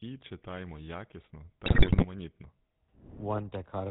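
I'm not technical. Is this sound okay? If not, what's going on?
No, not quite. The whole thing goes through the GSM full-rate codec, an old mobile-phone squeeze that cuts off the top end and leaves speech sounding buzzy and gravelly. Then, from about 1.66 to 2.05 s, GSM bit errors hit: corrupted data from a weak connection makes the speech squawk, pop and gargle briefly.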